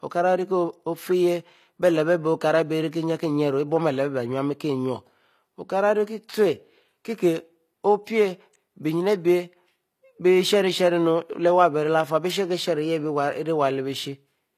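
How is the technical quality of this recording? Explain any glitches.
The technical quality is compromised by clearly audible codec damage throughout. HE-AAC compression is the likely cause, across the whole recording: the lower spectrum is coded directly while the treble is rebuilt by copying lower bands upward. Sibilants in the speech sound gritty and metallic, nothing reaches above about 14.9 kHz, and the damage points to a low bitrate of around 24 kbps.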